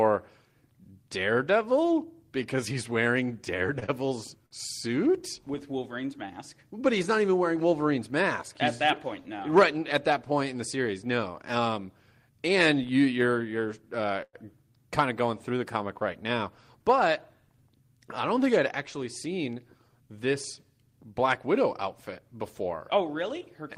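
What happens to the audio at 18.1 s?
At 18.1 s the speech continues without any audible fault or interruption.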